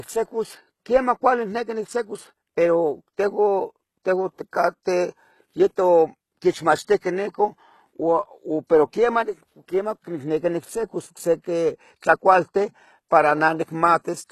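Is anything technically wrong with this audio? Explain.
Yes. Throughout the speech, the treble behaves the way HE-AAC compression at a very low bitrate, likely around 16 kbps, would leave it. The codec spends its few bits on the lower spectrum and fakes the top by copying lower bands upward under a coarse envelope, with nothing at all above about 12.3 kHz. Because those copied harmonics don't match the real ones, s sounds come out plainly gritty, metallic or lispy.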